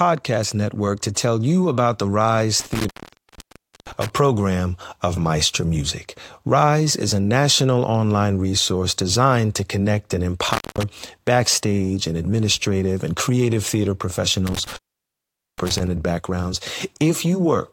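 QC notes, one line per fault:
2.60–4.10 s, intermittent contact: a loose connection opens for about 0.98 s, so the speech drops out to faint hiss, with crackle as contact breaks and returns.
10.48–10.83 s, intermittent contact: the line opens again briefly, about 0.2 s, right after "designed to connect and", leaving a crackly gap before "backstage and administrative and".
14.47–15.87 s, intermittent contact: the connection loses contact for about 0.82 s after "administrative and creative theater", cutting the speech to faint hiss with crackle at both edges.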